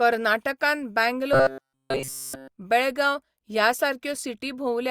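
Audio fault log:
1.33–2.48 s, robotic sound from repeated short buffers: audio likely arrived too seldom, so a fragment of about 7.5 ms looped throughout, forcing a rigid 134 Hz metallic buzz before "बेळगांव ह्या".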